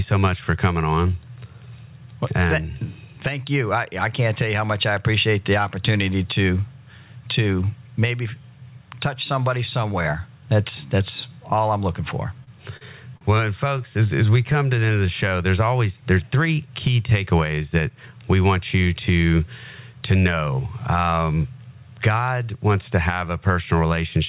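Speech that has come through a call path, band-limited with nothing above 4 kHz, which fits a 64 kbps G.711 mu-law link. Gain pumping runs throughout, with the level swinging by roughly 15 dB. Loud and soft parts end up closer in level, squashing the dynamics. The likely cause is gain set far too high at the microphone, with a fast limiter clamping down on each peak. Three short stalls from late packets fall at 12.44 to 12.50 s, 12.77 to 12.84 s and 13.17 to 13.24 s. Each time the jitter buffer ran dry and the receiver held the last sound for 29, 41 and 40 ms until the packet arrived, so nothing is lost but each sound drags with a slight buzz or dip. A jitter buffer slow-down follows from 13.90 to 15.29 s. The speech plays at 91% speed at unchanged pitch as repeated pitch periods add 140 ms to rebuild the buffer reserve. From 17.26 to 18.09 s a jitter buffer speed-up runs the speech at 113% speed, trimming about a tenth of a second of short pieces to pull the excess delay back down, and the speech sounds hurried.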